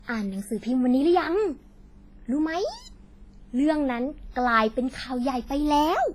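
Throughout the speech, heavy WMA compression is audible. The sound rings and smears, with a washy hiss that swells and fades with the voice. The damage is likely from a transform codec at a low bitrate, around 24 kbps.

At 4.09 s a single sharp click cuts through. This is likely dropped samples: roughly one sample is missing, so the waveform jumps straight to a later value. The gap is far too brief to remove any sound.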